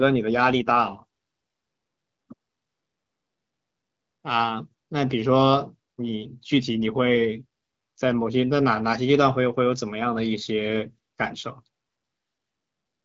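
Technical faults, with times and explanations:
No technical faults are present.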